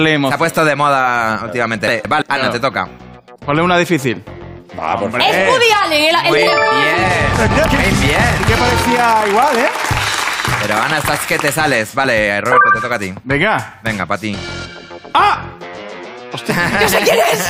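The audio has chunks out of order twice, at 1.88 to 2.22 s and 7.34 to 7.68 s, where one 171 ms block plays one slot late, swapping with its neighbour. Each swap is a brief jumbled stretch with three hard joins.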